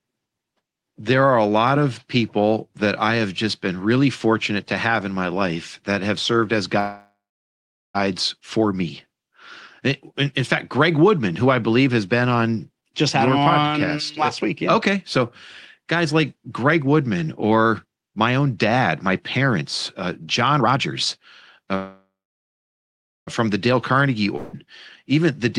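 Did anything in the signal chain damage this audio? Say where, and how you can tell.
Yes. The damage is in the network and jitter-buffer stage of a call.

Two call audio freezes stand out. The first runs from 6.79 to 7.97 s, right after "that have served as". The last sound smears into a fading buzz, then about 0.79 s of silence. The audio resumes with "for me", and nothing is lost. The second freeze runs from 21.76 to 23.29 s, with about 1.17 s of silence. The likely cause is delayed packets draining the jitter buffer, so a gap was inserted.

A skip ahead occurs at 12.81 to 12.84 s. After "believe has been on", the audio jumps straight to "just had your". The join is tight, with only a 12 ms fill. Roughly 150 ms of audio is missing. Later audio was already queued, so the dropped stretch was simply bypassed. The splice is abrupt, and there is no pause to mark it.

A jitter buffer speed-up follows, from 13.38 to 21.71 s, starting after "on just had your". 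The sound runs at about 109 percent speed with unchanged pitch. It feels hurried. The buffer was overfull, so the receiver trimmed small pitch-period slices again and again. Around 0.7 s was removed in total to pull the delay back down.

A long network dropout hits at 24.36 to 24.55 s. There is a brief 172 ms concealment buzz but no silence. Then the audio comes back further on. About 0.7 s of the original is gone for good. The likely cause is a run of packets that never arrived, which the receiver could only paper over briefly before skipping past.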